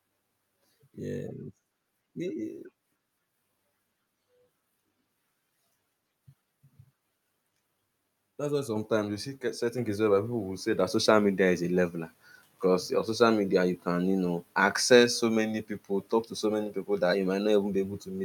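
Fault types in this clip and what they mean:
Microphone volume stepped up: the audio lifts in level abruptly, twice, at about 8.76 s and again at about 9.78 s, each time by about 5 dB. The speech and the background noise jump together, which tells you it's the input gain on the mic itself being nudged up by the call software, not the talker getting louder. The two steps land about a second apart, so the level climbs roughly 10 dB within a short stretch.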